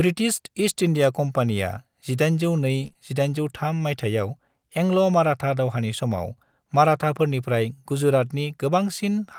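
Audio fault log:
2.83 to 2.85 s, lost packet rebuilt from error correction: one 20 ms packet of the speech never arrived, but the next packet carried a low-bitrate copy of it, which the decoder played in its place. There is no gap or smear. Instead, that 20 ms frame sounds rougher and grainier than its neighbours. The copy is a genuine coarse encoding of the missing audio rather than a guess, so the sound continues naturally, only briefly degraded in quality.
2.87 to 2.97 s, short concealed packet loss, twice in close succession: two 20 ms stretches failed to arrive in time, and no backup copy was available. The receiver extrapolated from the preceding sound and then crossfaded back into the real signal, with the filled regions running to about 31 ms and 22 ms. This produces a brief smeared, wobbly patch where the sound is stretched or guessed rather than reproduced. That differs from the merely rough frame just before it, and a short consonant here could go missing.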